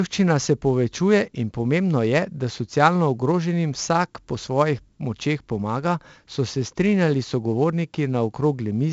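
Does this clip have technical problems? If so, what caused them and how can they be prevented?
Yes. The speech carries 4-bit ADPCM compression damage from start to finish, and it is heavy. Each sample is coded as a small 4-bit step from a predicted value. The step size adapts, but it lags. This leaves a gritty hiss that rises and falls with the speech level, and sharp attacks come out distorted. Nothing is heard above about 7.8 kHz, which fits a 16 kHz sample rate at 64 kbps. Recording and storing the speech as 16-bit PCM, or using a modern codec at a higher rate, would prevent it.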